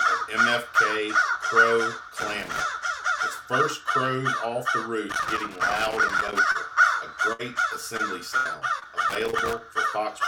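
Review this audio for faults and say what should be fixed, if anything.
Loose connector crackle occurs at 2.20–2.61 s, 5.09–6.39 s and 9.09–9.57 s. A worn or dirty contact is making and breaking as it moves, chopping the signal on and off, and any DC on the line turns each break into a pop. On a waveform these sections show jagged spikes and sudden dropouts. On a spectrogram they appear as scattered vertical broadband streaks in irregular clusters. Clean or replace the connector and strain-relieve the cable so the contact cannot shift.

Short concealed packet loss occurs at 6.51–6.57 s, 7.97–8.01 s, 8.79–8.83 s, 8.83–8.87 s (directly after the previous one) and 9.31–9.35 s (inside the last crackle). Between 20 and 40 ms of audio never arrived each time. The receiver filled each hole by extending the preceding sound and then blended back, so you hear a brief smear or wobble. On a spectrogram each appears as a short stretch of smoothed, repeated texture with a soft seam at the rejoin. 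A steadier network path or a larger jitter buffer would prevent these.

Burst of packet loss occurs at 7.33–7.41 s, where about 60 ms is missing, and at 8.37–8.47 s, where about 80 ms is missing. Several consecutive packets were lost or came too late. The concealer prolonged the last sound while fading it, and the audio then resumes further on with the content in between gone. On the waveform each burst shows a decaying, repetitive stretch followed by an abrupt change. On a spectrogram it appears as frozen harmonics or hiss that dims, then a discontinuity. Forward error correction or redundant packet transmission would protect against these bursts.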